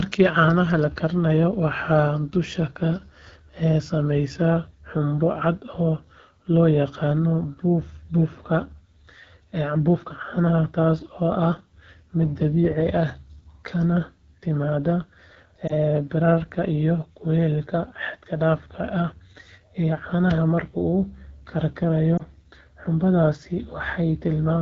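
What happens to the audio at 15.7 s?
Right around 15.67 to 15.73 s, just before "bararka iyo kuleylka", there's a lost AMR speech frame. The damage is only about 20 ms, which fits a single dropped frame. Radio errors corrupted it, so the decoder filled the gap by reusing the last good pitch and vocal-tract settings at a lowered gain. You hear that as a quick dip or little warble in the sound before the voice comes back weak or rough for a moment.

Underneath that, the whole stretch is running through the AMR wideband (HD Voice) codec at 8.85 kbit/s, one of its lowest rates. At that rate the speech band up to 6.4 kHz is modelled crudely, so the sound comes across noticeably rough and raspy. The top band from 6.4 to 7 kHz is just shaped noise rather than real detail.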